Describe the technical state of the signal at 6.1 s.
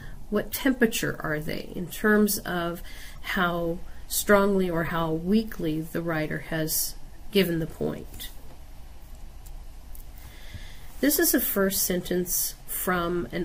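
At 6.1 s the signal is intact, with no audible fault at that moment.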